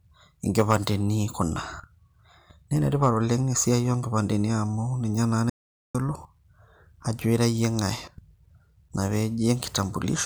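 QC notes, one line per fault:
0.59–0.87 s and 3.03–3.09 s, hard clipping: the speech peaks run past what a stage in the chain can pass and are sliced flat, by about 5 dB in the first stretch and about 2 dB in the second. The squared-off tops generate harmonics high in the spectrum, so the first event comes across as crackle on the loud syllables, while the shorter, milder second one is a brief crackle on a peak.
5.50–5.95 s, audio dropout to silence: the speech cuts off abruptly and returns 0.45 s later, with the gap in between completely empty, with no room tone or background at all. That silence points to the input being lost while recording continued, most likely from a momentary disconnect or link failure, with the encoder filling the gap with silence. Whatever was said during it is missing.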